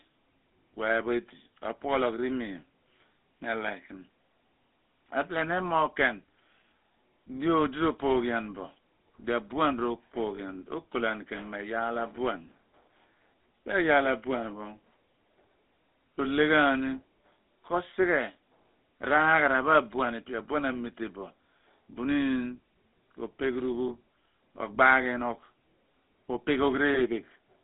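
A speech recording carried over the GSM full-rate codec, whose buzzy, gravelly roughness runs throughout and fits a 13 kbps full-rate stream. The band runs only from 200 Hz to 3.7 kHz, but unlike a plain telephone filter the voice itself is grainy, because the codec rebuilds it from regularly spaced excitation pulses. Lost GSM frames occur at 10.36, 23.88 and 26.94 s, each about 20 ms long. Instead of a silent gap or a click, as in an ordinary dropout, each one holds the sound as a brief metallic ring, because the last good frame's settings are repeated.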